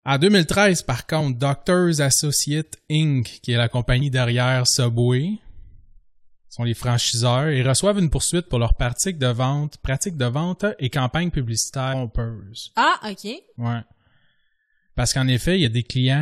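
Damaged data in a compressed stream is heard five times in this speech recording, at 1.20, 4.01, 8.16, 11.92 and 15.64 s. At each point part of the encoded stream is corrupt, so the decoder misreads those frames, loses its place and hunts for the next valid frame header before it can resume. Each event passes as a brief chirp or blip lasting under 20 ms.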